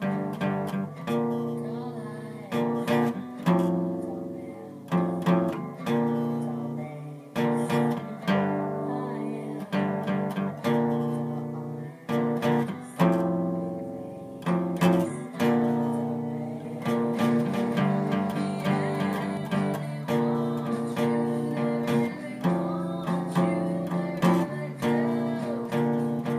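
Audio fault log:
16.65–19.37 s, doubled audio track: A second full-band copy runs about 0.4 s behind, roughly 5 dB quieter. It has no decay or room colour. It starts and stops abruptly. The likely cause is a slower second capture path or two out-of-step copies in an edit.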